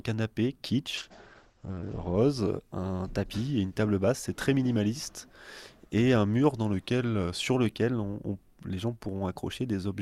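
From 0.99 to 2.21 s a call bitrate drop cuts the encoder from 48 kbps to 10 kbps, and audio bandwidth shrinks from 20 kHz to 8 kHz. The sound turns coarse and muffled, losing its top end until the rate recovers.

At 2.59 to 3.35 s the sound runs about 5.5% fast and sits roughly 93 cents sharp. At 6.73 to 7.55 s it runs about 5.5% slow and roughly 99 cents flat. Each is a near-semitone detuning that snaps back, likely a drift correction step from clock-matching resampling.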